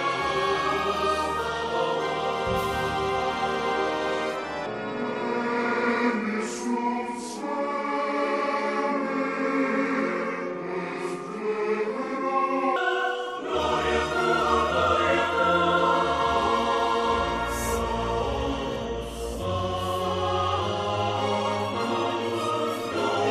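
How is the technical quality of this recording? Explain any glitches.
One glitch stands out. A section at the wrong speed runs from 4.66 to 12.76 s, likely from being played against the wrong clock, so it moves at 0.731 times normal speed. Pitch falls with it, about five semitones lower, making that stretch sound deep, heavy and slowed before normal speed returns.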